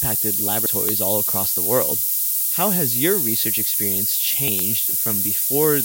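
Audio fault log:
Throughout, low bit depth with noise shaping: a steady, thin hiss lies under all of the speech and grows much brighter toward the top of the band, sitting at a level of about 10 dB relative to the speech. The coarseness points to roughly 3-bit quantisation. The rounding error from so few levels is fed back and pushed upward in frequency, so the noise gathers in the treble.
0.66 s and 4.48 s, dropped buffer (overrun): each spot gives a sudden jump in the speech, with no gap of silence, as if around 70 ms of sound were skipped. The likely cause is the program failing to collect its samples before the hardware overwrote them, so that stretch is lost and the audio on either side is butted together.
0.89–0.91 s, loud pop: a single sharp pop cuts across the speech for about 20 ms, peaking about 15 dB above it, while the speech carries on underneath without a break. This is likely a sudden voltage pulse added to the signal, such as from a switch, static discharge or a driver glitch. 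The circuitry that follows shapes the pulse into the brief, hard transient that is heard.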